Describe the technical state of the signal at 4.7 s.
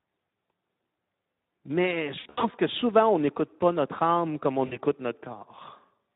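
VoIP packet loss concealed by the speech codec occurs from 4.65 to 4.78 s, just after "pas notre âme comme". About 60 ms of audio went missing. The decoder filled it by repeating its last pitch and filter with steadily falling gain, so the speech smears into a fading buzzy, coloured tone and stays weak briefly after recovery.

Beneath this, Speex codec damage is plainly audible. The coarse excitation makes the speech hoarse and noisy, which fits a low setting of roughly 11 kbps.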